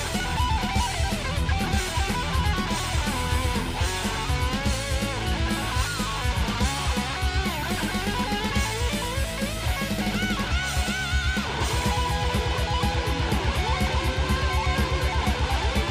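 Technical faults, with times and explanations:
No technical faults are audible.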